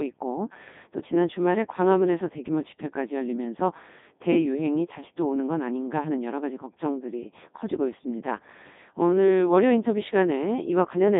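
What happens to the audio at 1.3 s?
At 1.3 s, as throughout the clip, the speech passes through a Codec 2 vocoder. Only pitch, voicing, energy and a spectral envelope survive, resynthesised from sine waves, so the voice sounds heavily robotic and buzzy, confined to about 200 Hz to 3.7 kHz, consistent with its 3.2 kbit/s mode.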